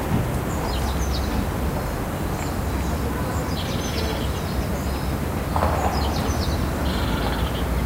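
No technical faults are audible.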